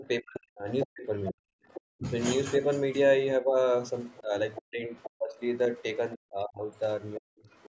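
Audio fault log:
0.00–2.09 s and 3.40–7.47 s, speech suppressed in double talk: the talker's level repeatedly dips, by as much as about 40 dB, for roughly a second in total across each stretch, likely because an echo canceller, unable to separate the talker from overlapping loudspeaker echo, attenuated everything.
0.84–1.81 s, 4.04–5.83 s and 6.76–7.70 s, other side's voice leaking through: a second voice sits beneath the talker, about 10, 15 and then 25 dB down, likely far-end audio from the loudspeaker that echo cancellation failed to remove from the microphone.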